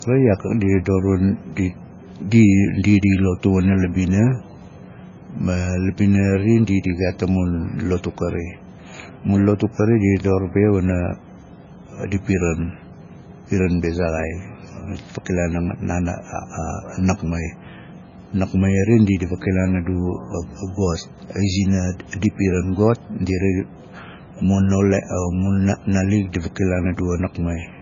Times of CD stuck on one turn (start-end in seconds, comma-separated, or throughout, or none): none